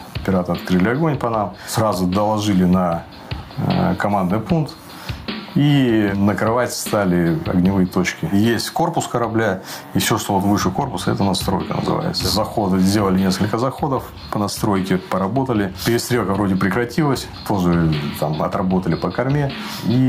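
Gain pumping runs through the whole clip: the gain swings by around 10 dB, dropping under each loud sound, likely from gain set too high with a fast limiter clamping down. The waveform looks flattened.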